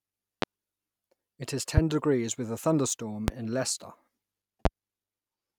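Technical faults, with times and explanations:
0.42–0.45 s, 1.77–1.81 s, 3.28–3.31 s and 4.65–4.69 s, loud pop: four single sharp thumps, each around 30 ms long and roughly 20 dB above the speech, which continues unbroken underneath. That continuity rules out a dropout. The likely cause is a voltage pulse, such as static or a switch, shaped by the downstream circuitry.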